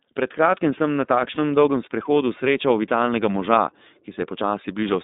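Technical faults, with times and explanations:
throughout: iLBC codec. The speech is confined to roughly 200 Hz to 3.7 kHz, with a plainly audible rough, slightly synthetic texture from coding the excitation in self-contained 30 ms frames. The overall character fits the 13.33 kbps iLBC mode.
1.35 to 1.39 s: lost iLBC frames. About 30 ms of audio, which fits a single lost frame, is replaced by the decoder repeating the last pitch cycle mixed with noise, heard as a brief held, buzzy vowel. The voice is right again almost at once because each frame decodes independently.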